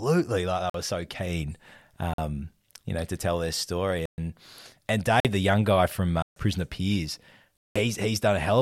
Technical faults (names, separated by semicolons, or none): block of digital silence